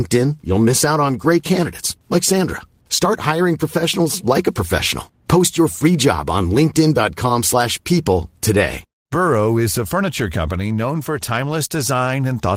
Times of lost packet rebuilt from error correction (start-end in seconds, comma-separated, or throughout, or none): none